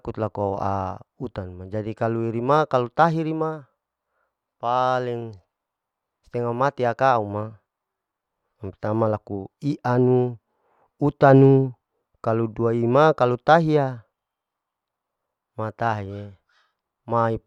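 No technical faults can be heard anywhere in the speech recording.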